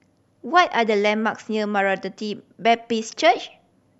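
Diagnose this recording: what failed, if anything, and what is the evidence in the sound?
Compressed frames skipped at 0.29 s, a codec-stage decoding fault. The speech jumps forward by about a tenth of a second, roughly four frames, and the join is a short smeared blip rather than a sharp click. The frame spacing of 26.1 ms fits an MP3-style frame of 1152 samples at 44.1 kHz. Those frames were either missing from the file or rejected by the decoder as corrupt. Because adjacent frames overlap, the gap is blurred instead of hard-edged.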